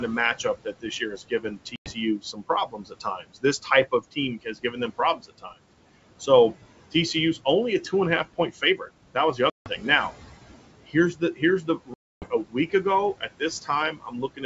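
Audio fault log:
Throughout: noise suppressor artifacts. The room noise, sitting about 16 dB under the speech, is pulled down by about 17 dB in the gaps and swells back under each phrase, so the background pumps with the talker. The suppressor estimates steady noise in every frequency band and attenuates those bands frame by frame. The wideband G.722 path itself stays clear.
0.44–5.54 s, 8.25–9.84 s, 10.85–14.44 s: speech cut by the noise suppressor. Word endings, soft consonants and quieter stretches drop out or turn faint, as if swallowed, totalling about one and a half seconds in the first span, under half a second in the second and about a second in the third. The deepest dips reach about 18, 13 and 19 dB. The suppressor misreads low-level speech as background noise and turns it down along with the room.
1.76–1.95 s, 9.50–9.69 s, 11.94–12.37 s: packet loss on an ADPCM call. Hard-edged silent holes of 100 ms, 160 ms and 280 ms open in the speech, the last fitting a burst of around fifteen packets. 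When the sound resumes it comes back slightly distorted, then settles within some tens of milliseconds. The lost audio was replaced with silence, and the ADPCM decoder's predictor and step size drifted away from the sender's until they reconverged.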